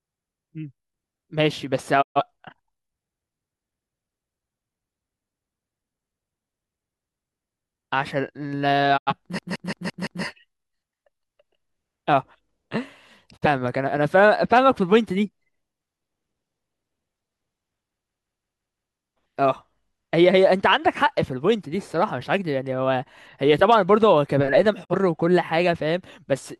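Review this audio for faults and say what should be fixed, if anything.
Digital broadcast dropouts mute the speech at 2.01–2.21 s, 8.96–9.13 s, 13.36–13.47 s and 24.83–24.95 s, each with a 20 ms fade. The lost spans of about 128, 85, 43 and 43 ms fit whole decoded frames failing and being muted. Prevent this with stronger error protection or a better reception margin on the broadcast link.

System hang loops at 9.39–10.24 s and 18.09–18.94 s repeat one 170.67 ms slice five times at 5.86 Hz, a machine-gun stutter. That fits an 8192-sample ring buffer replaying while the host stalled, and essentially nothing is skipped afterwards. Prevent this by fixing the driver or host stall and having playback output silence, not stale buffer contents, on underrun.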